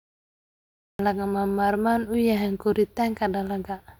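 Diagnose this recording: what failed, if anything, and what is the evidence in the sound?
The failure is a cut-off start, at the capture or recording-start stage. The first 0.99 s is digital silence. At 0.99 s the speech enters abruptly, already in progress, just before "lagama maarmaan u". There is no natural onset or fade-in. The sound is simply switched on mid-utterance. The recording or stream began late, after the talker had started. The opening of that sound was never captured, and the gap before it was left silent.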